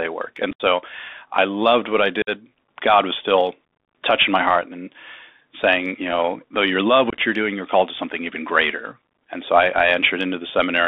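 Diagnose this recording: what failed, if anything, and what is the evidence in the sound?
The codec stage is at fault: the whole clip passes through a Bluetooth CVSD headset codec, consistent with a 64 kbps link. Speech is confined to about 300 Hz to 3.6 kHz. The one-bit adaptive-step coder cannot track loud high sounds, so sibilants turn scratchy over a steady granular hiss.

The wireless link between headset and phone also failed, causing unconcealed Bluetooth headset packet loss. Lost voice packets were replaced by silence or an idle pattern, leaving abrupt holes at 0.51–0.61 s (75 ms lost, one run near 68 ms), 2.22–2.30 s (about 52 ms), and 7.10–7.18 s (45 ms in broken fragments).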